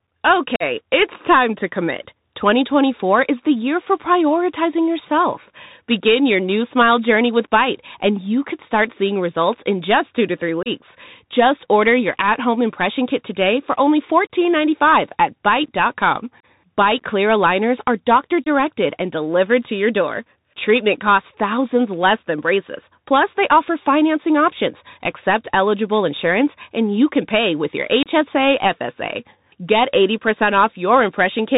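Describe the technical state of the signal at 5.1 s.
At 5.1 s the speech is passing through a Bluetooth CVSD headset codec, which affects the whole clip, not just this moment. The link codes the signal as a single up-or-down bit per sample with an adapting step size, which fits a 64 kbit/s stream. The damage is plainly audible. Nothing above 4 kHz survives, loud high content overruns the step and distorts, s sounds come out scratchy, and a granular hiss sits under the speech.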